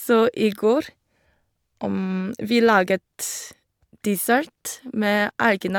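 Nothing stood out as a technical fault on listening to this speech recording.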